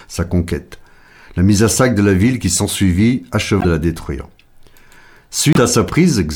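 At 3.59 to 3.65 s, between "la ville qui s'ensuivit" and "la détruire", and again at 5.53 to 5.58 s, the speech skips ahead with a brief chirp, burst of noise or short hole, about two 26.1 ms frames long, likely a broken MP3 bit reservoir, where frames decoded from borrowed bytes that no longer belonged to them.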